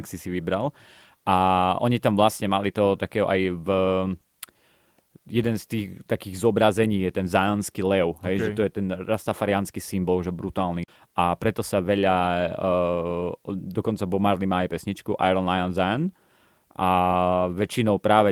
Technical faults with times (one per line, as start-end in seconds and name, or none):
none